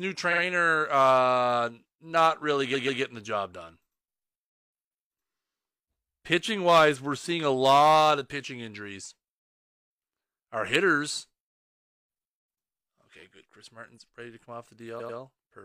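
Repeated frames stutter the audio at 0.28, 2.70 and 14.96 s: a block of compressed audio (46, 139 and 93 ms long) plays three times in a row, lengthening the clip instead of leaving gaps as dropouts would.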